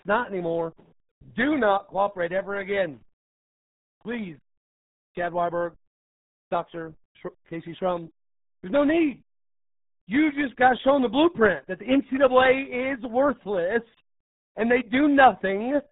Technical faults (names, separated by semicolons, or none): RealAudio 14.4 codec